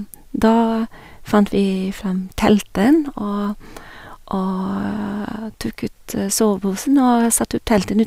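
No technical faults can be heard anywhere in the speech, and the signal stays continuous and intact throughout.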